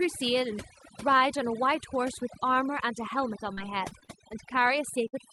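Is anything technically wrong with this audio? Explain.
Yes, the speech has three problems, heard through a call path whose Opus coding keeps content up to about 12 kHz.

Overdone noise removal runs through the whole clip. The noise suppressor was set too aggressively, so it pulls individual frequency bands down whenever they sit near its noise estimate, taking quiet parts of the voice with them. The background becomes near-silent with twinkling specks.

Repeated packet loss, with a robotic sound, occurs from 3.53 to 4.10 s. Four separate gaps, the longest 36 ms and about 100 ms missing in all, were each patched by extending the preceding sound. Losses this close together make the passage choppy, with fragments dropped.

A burst of packet loss at 5.08 to 5.15 s removes about 60 ms of audio. The receiver filled the hole by continuing the last sound while fading it down, so it comes out as a brief held buzz or fading hiss before the voice resumes with that portion missing.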